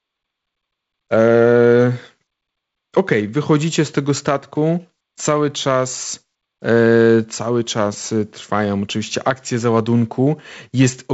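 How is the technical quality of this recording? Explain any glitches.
The technical quality holds up, with no glitches to explain.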